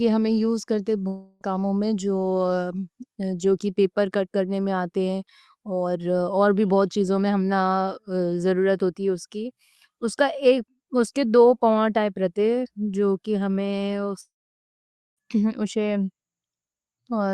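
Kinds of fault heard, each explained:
Long network dropout, 1.07–1.43 s and 14.21–15.19 s: packets likely stopped arriving, so the last sound smears into a fading buzz, and the second gap goes silent.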